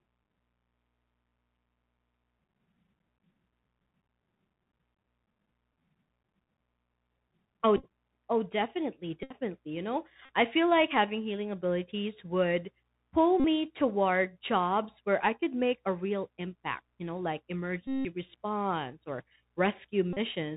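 Throughout, the Bluetooth CVSD headset codec's one-bit delta coding stops everything above 4 kHz, which shows as a hard spectrogram ceiling, with scratchy s sounds and granular hiss beneath. Bluetooth headset packet repeats, where lost packets were decoded again, buzz near 267 Hz and appear as regular 3.75 ms striations in the waveform. They occur at 7.77 to 7.85 s before "oh definitely", scattered in runs of up to about 15 ms; at 9.23 to 9.35 s; at 10.25 to 10.29 s before "I feel like having"; at 13.40 to 13.45 s between "healing abilities would pull" and "toward jobs where I"; at 17.87 to 18.06 s, the longest; and at 20.13 to 20.18 s.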